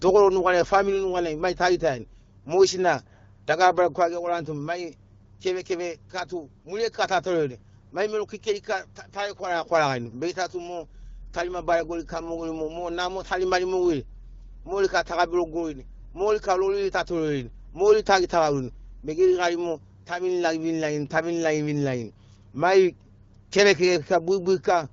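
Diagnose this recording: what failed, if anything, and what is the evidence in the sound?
Nothing here has failed: the speech comes through the way you'd expect from an AMR wideband (HD Voice) call at 12.65 kbit/s, and nothing in the sound points to a problem at any stage of the chain.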